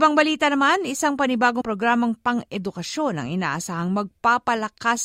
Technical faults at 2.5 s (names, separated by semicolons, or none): none